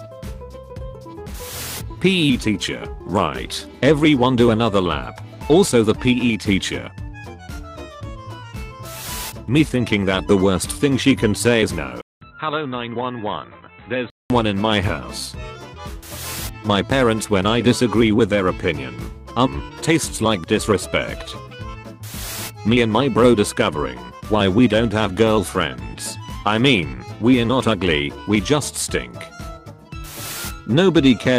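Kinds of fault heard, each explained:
Input switched to a poorer device: from 12.01 to 14.30 s the sound abruptly turns dull and boxy and drops in level by roughly 10 dB, with a faint new noise floor, before clearing again. This is likely a switch to a narrower-band input. On a spectrogram, energy above 4 kHz disappears for that span, and a gap of about 200 ms appears at the switch. On the waveform, that gap is a flat line followed by visibly smaller amplitude.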